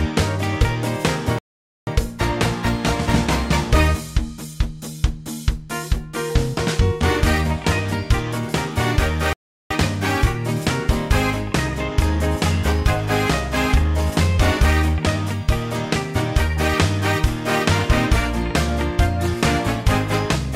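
The audio has two playback stalls, where the sound just cuts out mid-flow and then carries on. The first runs from 1.39 to 1.87 s, close to half a second of dead silence, and the second from 9.33 to 9.71 s, about 0.37 s. Neither gap sounds like a natural pause. They're abrupt dropouts that most likely came from the player running dry on buffered data or its playback thread getting blocked until it caught up.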